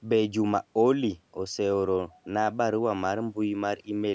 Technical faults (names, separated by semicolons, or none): none